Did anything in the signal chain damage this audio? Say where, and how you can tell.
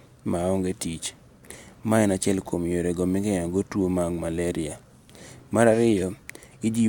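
No, nothing in this speech clip points to damage at any stage of the signal chain.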